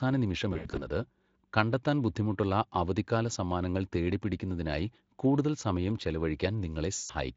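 VoIP packet loss concealed by the speech codec hits at 0.53–0.89 s, where gaps are scattered over about 240 ms, and again at 6.95–7.11 s. The decoder extrapolates its last pitch and filter, so speech smears into a fading buzzy tone or coloured noise, seen as flat, decaying harmonics or noise on a spectrogram.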